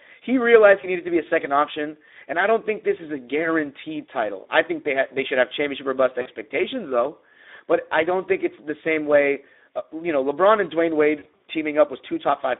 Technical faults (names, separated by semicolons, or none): Speex codec; VoIP packet loss concealed by the speech codec